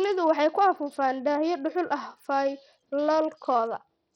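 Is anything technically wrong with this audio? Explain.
Yes, throughout the speech the sound is heavily damaged by what is likely Bluetooth SBC compression, with a starved bit pool fitting a stream around 64 kbps. Upper sub-bands get few bits, so treble flickers out and gritty noise rides along, visible as a patchy, blocky top band on a spectrogram.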